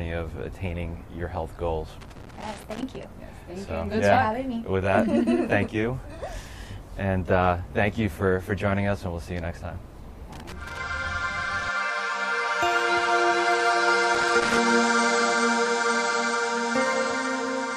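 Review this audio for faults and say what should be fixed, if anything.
Loose connector crackle appears at 2.01 to 3.03 s, 10.33 to 10.78 s and 14.15 to 14.58 s as irregular bursts of scratching and crackle over the sound. A worn or dirty contact in the signal path is making and breaking many times a second, chopping the audio into fragments, with any DC on the line adding pops. The first burst lasts about a second, and the later two are under half a second each. To prevent it, clean or replace the suspect plugs and cables and secure them so they cannot move during recording.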